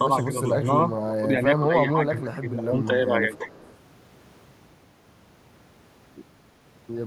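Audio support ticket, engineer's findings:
Speech suppressed in double talk at 0.92–1.27 s, 1.6–2.76 s and 3.22–3.4 s. Speech dips and thins in patches. The first two drop by about 10 dB, and the middle one stays ducked for around a second. The last is shallower, about 5 dB. Likely the loudspeaker side's echo canceller hitting double talk and clamping down on everything, its own talker included, because it can't separate the two.

Echo leak at 3.35–3.77 s, overlapping the tail of that last dip. A faint delayed copy of the speech trails 332 ms behind, sitting about 30 dB under the direct signal, so it's subtle but there. Likely residual loudspeaker pickup the canceller didn't fully subtract, which then got sent back down the line.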